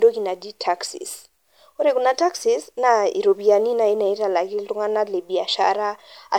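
Speech runs for the whole clip with generation loss from start to end. The sound is swirly and hollow, with a smeared, watery texture and softened consonant attacks, noticeably worse than a single lossy pass would leave. This likely comes from repeated MP3 encoding, around seven times, each pass at a rate that fits 128 kbit/s. Every decode and re-encode falls on a shifted frame grid, so quantisation noise and spectral gaps pile up.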